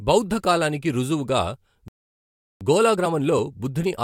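At 1.88 s the speech cuts off mid-flow into a playback stall, about 0.73 s of silence until 2.61 s, likely the player starving for data. The waveform shows a flat line, and the spectrogram shows a blank vertical band.

From 2.61 s to the end, time-compressed catch-up speeds delivery to about 1.1 times normal at unchanged pitch. Tiny cross-faded cuts leave closely spaced seams in the spectrogram.

At 3.05 s, compressed frames skipped drop roughly one frame, around 20 ms of audio. The speech jumps ahead by that much, and this shows as a narrow discontinuity in the harmonic traces.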